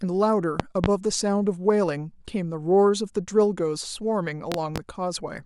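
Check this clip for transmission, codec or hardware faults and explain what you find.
Two loud pops, each a quick double, around 0.60–0.88 s and 4.52–4.80 s, roughly 20 and 15 dB over the speech, likely a voltage spike from a plug, switch or static riding on top.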